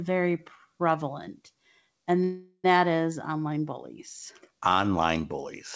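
A call audio freeze runs from 2.24 to 2.73 s, between "very prevalent and" and "is online bullies". The likely cause is held-up packets draining the jitter buffer, so the last sound is stretched into a fading buzz or hiss for about 0.4 s, then 60 ms of silence, before the speech resumes with nothing lost.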